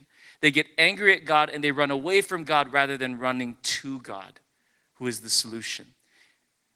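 Nothing stood out on listening to this speech.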